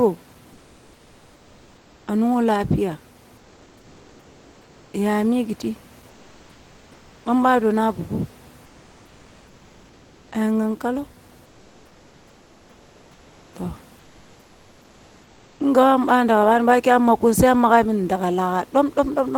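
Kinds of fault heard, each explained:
Comfort noise in place of the background: In six pauses, the real room noise gives way to a steady, featureless hiss lasting about 1 to 2 s. The fill sits up to about 3 dB quieter. The likely cause is Opus discontinuous transmission.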